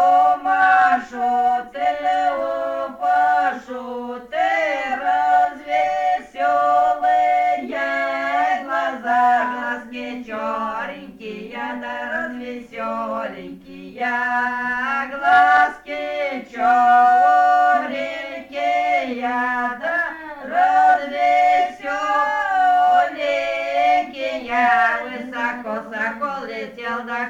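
No technical faults can be heard anywhere in the recording; the signal holds steady and intact throughout.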